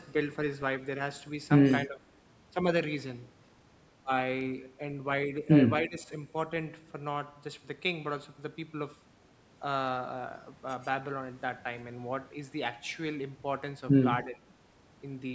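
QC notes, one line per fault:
1.84–2.07 s, 5.82–6.11 s and 14.23–14.50 s, speech suppressed in double talk: the speech dips by about 10 dB in the first two and about 15 dB in the last, each for roughly a fifth to a third of a second. This is likely an echo canceller ducking the near talker during overlapping talk. Unlike a packet dropout, the speech stays audible under the dip rather than going fully silent.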